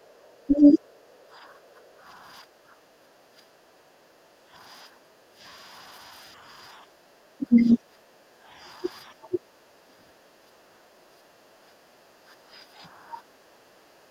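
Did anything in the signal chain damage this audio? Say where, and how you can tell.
Yes. The room tone sinks by about 10 to 12 dB at 0.00–0.19, 1.07–5.4, 6.77–7.1, 8.06–8.52 and 9.67–14.1 s, then recovers. This is background gated by the echo canceller during call processing: it pulled the microphone down while the loudspeaker played.

The talker's voice also dips, by roughly 10 dB and up to about 20 dB, at 0.47–0.79, 7.38–7.78 and 8.83–9.39 s. The likely cause is speech suppressed in double talk: the same canceller mistook near-end speech overlapping the far end for echo and attenuated it.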